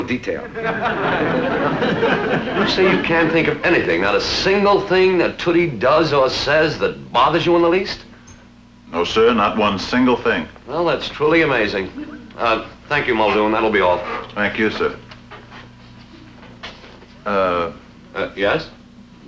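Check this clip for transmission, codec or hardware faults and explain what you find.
No faults turn up anywhere in the clip.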